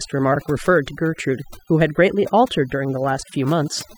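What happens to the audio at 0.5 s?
At 0.5 s the speech suffers from overdone noise removal, present throughout. Heavy denoising mutes bands near the noise floor. The background twinkles.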